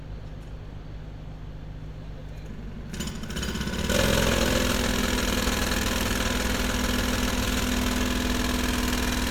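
No faults can be heard.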